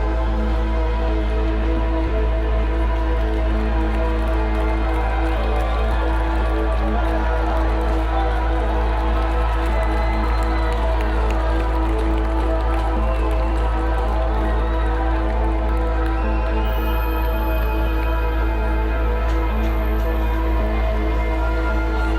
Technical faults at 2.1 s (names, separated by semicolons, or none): compressed frames skipped